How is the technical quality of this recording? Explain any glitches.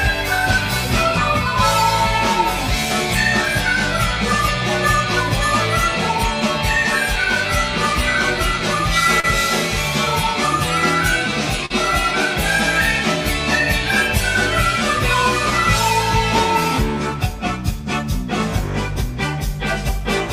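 Two brief glitches affect the recording, both short concealed packet loss. At 9.20–9.25 s and 11.66–11.72 s, about 40 ms of data arrived too late, and the receiver stretched the preceding sound across the gap, leaving a quick smear or wobble.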